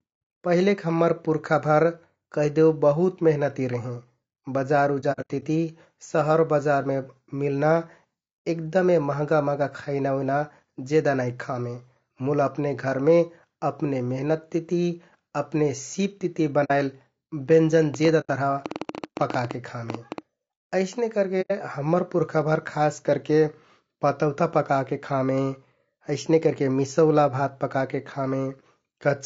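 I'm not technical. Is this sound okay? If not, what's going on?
No. The speech was likely squeezed by low-delay AAC compression, the kind video calls use, so the voice sounds rough and grainy throughout.

AAC frame loss with muting: chunks of data went missing and were replaced by silence, leaving soft gaps at 5.0 to 5.43 s, 16.64 to 16.71 s, 18.2 to 18.3 s and 21.41 to 21.52 s.

A train of clicks runs from 17.94 to 20.19 s, likely interference or a faulty connection, giving about twenty uneven pops, close to ten per second.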